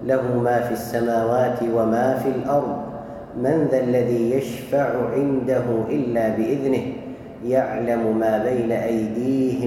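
Nothing stood out as a technical fault on listening through this clip.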